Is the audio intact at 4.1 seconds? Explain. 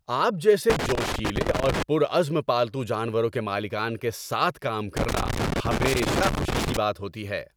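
Yes, the speech at 4.1 seconds plays through intact, with no dropout, click, distortion or other fault at that moment.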